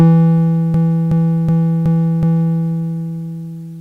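A music clip with a system hang loop from 0.74 to 2.60 s. A 372 ms slice of music repeats exactly five times at about 2.7 Hz, which fits a 16384-sample ring buffer at 44.1 kHz that kept replaying while the system froze. Because the loop is long, it sounds like a repeating skip rather than a steady buzz. The repeats are sample-identical and little or no audio is lost, which sets it apart from dropouts or a repeated musical phrase.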